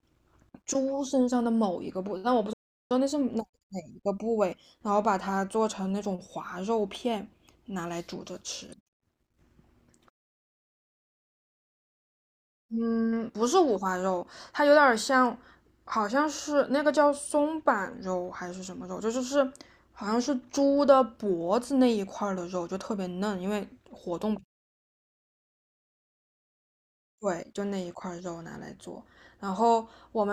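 A playback stall interrupts this speech clip at 2.53 s, where the sound cuts off mid-flow and the output stays silent for about 370 ms before resuming at 2.91 s. The gap is too long and too clean to be a pause in delivery; it is an abrupt dropout to nothing, after which the audio carries on. This is likely the player starving for data or having its output thread blocked, so nothing reached the output until it recovered.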